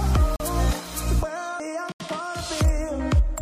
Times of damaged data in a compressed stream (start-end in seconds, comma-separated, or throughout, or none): 1.60